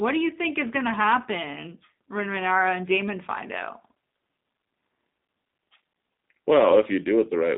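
Throughout the speech, G.729 codec damage is plainly audible. The speech is rebuilt from a vocal tract model, a pitch predictor and sparse pulses, which gives it a synthetic texture and fits G.729A at 8 kbit/s. A spectrogram shows nothing above 3.7 kHz and little below 200 Hz.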